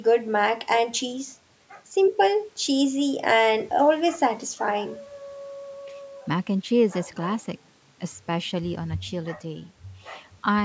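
Nothing stood out on listening to this speech, which has the ordinary character of audio that has passed through a call's microphone processing.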